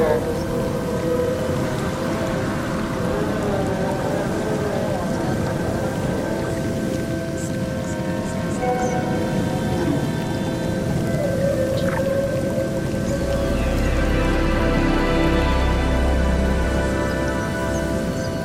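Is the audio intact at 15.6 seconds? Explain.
Yes, the audio at 15.6 seconds is intact, with no dropout, click, distortion or other fault there.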